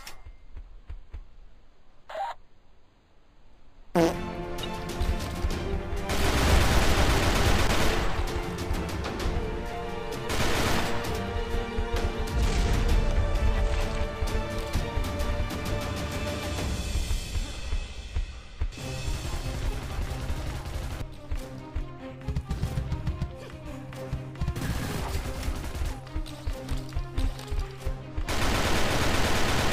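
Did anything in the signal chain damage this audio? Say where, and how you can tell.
Yes. Clock drift buffer slips run from 0.28 s to 29.54 s as a regular click about every 0.94 s, some thirty in all, at the driver or buffer stage. The steady spacing likely comes from two devices on separate clocks that disagree by roughly 400 parts per million. The buffer between them drifts until a small block of samples, around 15, is dropped or repeated, and each slip breaks the waveform into a click.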